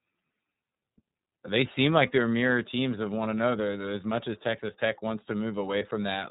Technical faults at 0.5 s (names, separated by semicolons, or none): iLBC codec